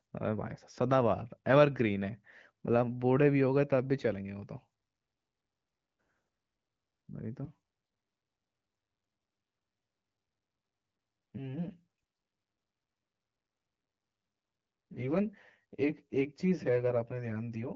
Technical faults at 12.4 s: channel delay (comb filtering)

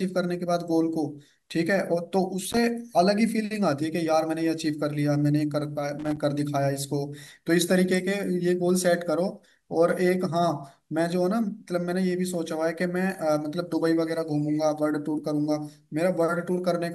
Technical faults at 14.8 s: none

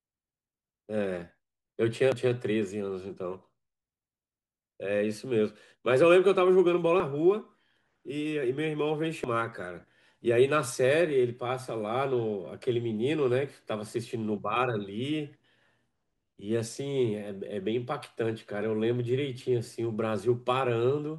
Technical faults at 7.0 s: dropped buffer (overrun)

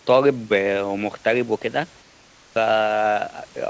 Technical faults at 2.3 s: comfort noise in place of the background

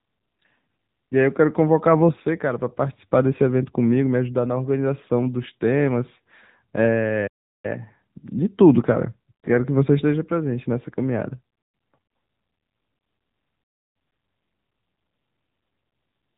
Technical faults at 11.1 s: AMR narrowband mobile codec

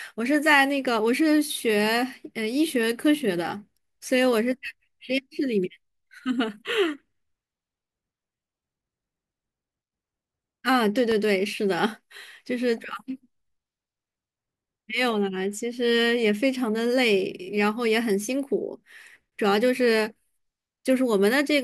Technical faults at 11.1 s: loud pop

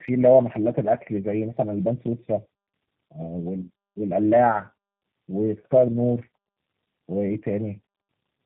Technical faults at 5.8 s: tandem speech coding

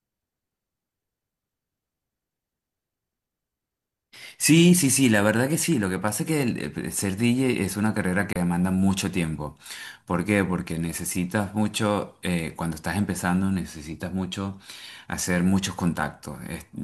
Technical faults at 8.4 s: digital broadcast dropout

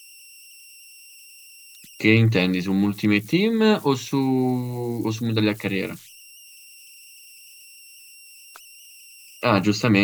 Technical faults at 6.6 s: converter idle tones

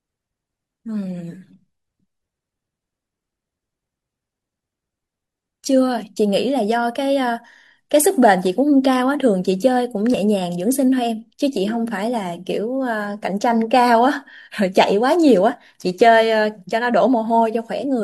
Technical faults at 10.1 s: overlap between stream segments

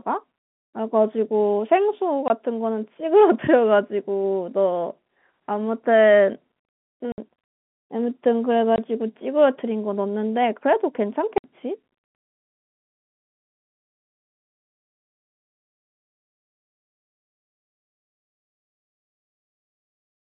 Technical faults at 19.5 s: none

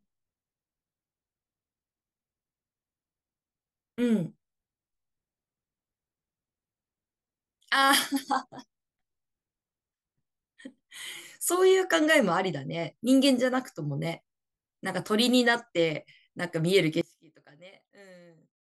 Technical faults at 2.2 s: none

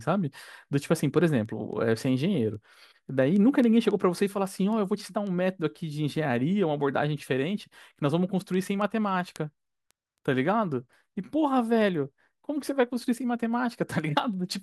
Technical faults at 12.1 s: word clock ticks

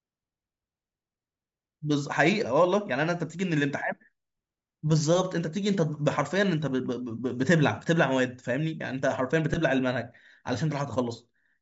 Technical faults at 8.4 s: none

